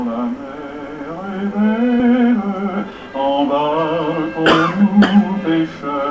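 A stretch of audio was dropped, on the way or by the receiver's jitter buffer, while later audio was already waiting, producing a skip ahead at about 2.00 to 2.02 s. Around 0.4 s of material is gone, with no fill inserted. Playback jumps straight from one side of the missing section to the other, so the sound before and after is spliced almost directly and the loss is heard as an abrupt forward lurch rather than a silence. Right after that, from 2.10 to 3.54 s, the buffer was still holding more audio than its target, so the receiver trimmed short pitch-period-sized pieces over and over to catch up. This jitter buffer speed-up runs the audio at about 109% speed without changing pitch, removing roughly 0.15 s in total, so the passage sounds hurried and its timing is pulled tighter than the surrounding material. Throughout, the sound carries the coding noise of a call path and has nothing above 8 kHz, which fits the G.722 codec at 64 kbps.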